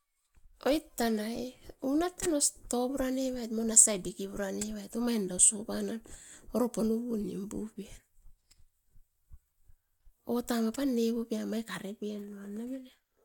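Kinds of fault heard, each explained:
Nothing stood out on listening; no technical fault could be heard anywhere in the speech.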